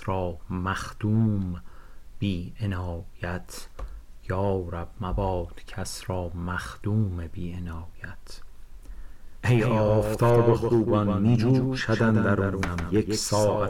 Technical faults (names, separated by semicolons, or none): doubled audio track